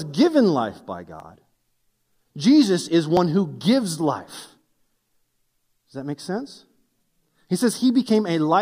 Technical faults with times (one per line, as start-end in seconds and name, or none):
1.20 dropped buffer (overrun)
3.17 dropped buffer (overrun)